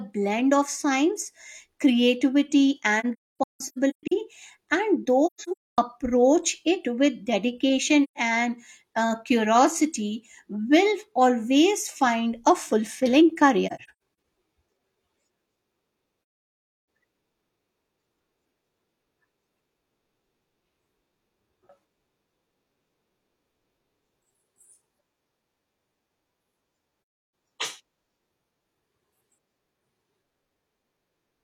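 AAC frame loss with muting cuts holes in the speech at 3.00–4.12 s after "of science creativity", 5.26–5.78 s, 8.03–8.17 s, 13.66–13.90 s after "always find a fulfilling", 16.60–16.67 s, and 26.99–27.33 s. Frames were lost and the decoder zeroed their spectrum, so the overlapping windows fade the sound out and back in rather than clicking. The first two events are scattered gaps with runs up to about 0.3 s.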